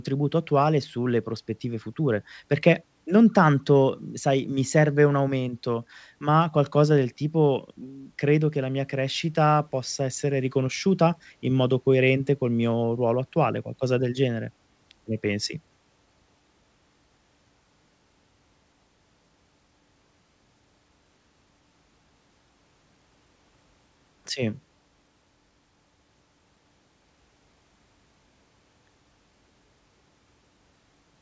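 No technical faults can be heard anywhere in the recording. The speech comes through a working call path, and with nothing above 8 kHz the band limit points to a wideband codec such as G.722.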